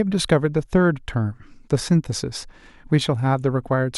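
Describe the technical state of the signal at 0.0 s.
At 0.0 s the speech signal is intact, with no audible technical fault at that moment.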